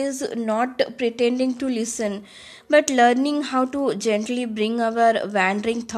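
No technical faults can be heard in the recording, and the speech signal stays continuous and steady throughout.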